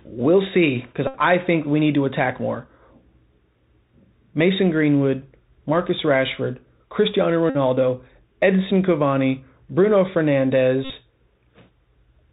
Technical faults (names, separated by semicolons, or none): Bluetooth CVSD headset codec; Bluetooth headset packet repeated